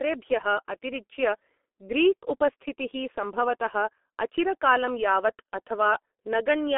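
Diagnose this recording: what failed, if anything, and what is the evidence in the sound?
The failure is at the codec stage: heavy G.723.1 damage throughout the speech. The audio is band-limited to about 250 Hz to 3.5 kHz, with nothing above 3.8 kHz. The voice is muffled and hoarse, and consonants smear, which fits a low-rate stream near 6 kbit/s whose 30 ms frames update the voice model too slowly.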